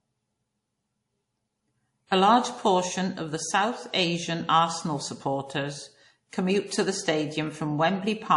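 Throughout the speech, nothing sounds above about 11.1 kHz, and two distinct kinds of smearing and swirl sit on top of each other. That points to likely transcoding between lossy codecs, such as a WMA encode re-encoded as low-bitrate MP3, rather than a single compression pass.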